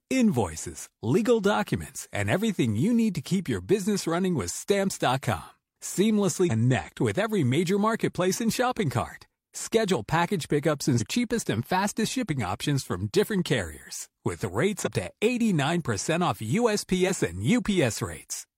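Compressed frames skipped at 6.46–6.52 s, 10.96–11.02 s and 14.82–14.88 s: whole blocks of the encoded speech never reach the output, so the audio jumps forward, roughly 150 ms before "with every major marketplace", roughly 200 ms between "package pickups" and "cheapest and fastest shipping", and roughly 50 ms at 14.8 s. The jumps fit frames of about 46 ms, three, five and one lost.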